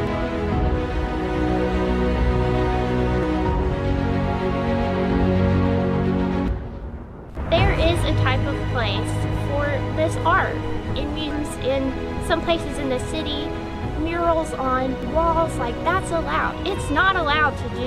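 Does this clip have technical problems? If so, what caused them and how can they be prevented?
Yes, there's damaged data in the compressed stream: short chirps or blips at 0.07, 3.23, 6.48, 11.31 and 15.03 s. Corrupted bytes make the decoder lose sync and skip ahead to the next frame header. Checksummed transfers and verified copies would prevent it.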